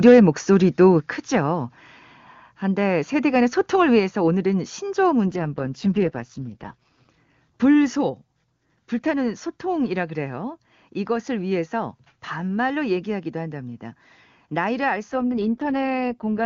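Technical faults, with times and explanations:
5.28–7.1 s and 15.11 s to the end, AMR rate drop: the speech suddenly gets rough, buzzy and synthetic, then clears up again after the first stretch. The bandwidth holds and nothing drops out, so this isn't a dropout. The wideband HD Voice codec is being pushed down to its low end, which fits a fall from 23.85 to 6.6 kbit/s, with the freed bits likely spent on error protection over a weak radio link.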